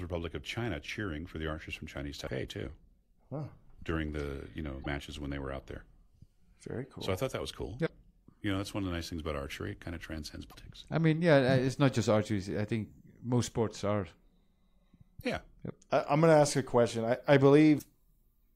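A speech recording marred by damaged data in a compressed stream: brief chirps, squawks, clicks or short holes at 2.24–2.29 s, 4.80–4.87 s, 7.83–7.90 s (after "thought that was cool"), 10.49–10.55 s (between "kind of transcends" and "I mean yeah it's") and 17.75–17.82 s (after "ask a question I"), each about 60–70 ms. Corrupted bytes make the decoder misread frames and hunt for the next header.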